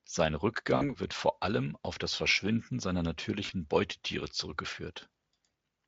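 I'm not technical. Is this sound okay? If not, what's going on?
No. At 0.75 to 0.91 s, just before "wird vor allem auf", and at 3.45 to 3.52 s, the speech smears into a fading buzz. This is VoIP packet loss concealed by the speech codec: about 60 ms and 40 ms went missing, and the decoder stretched the preceding sound to fill them.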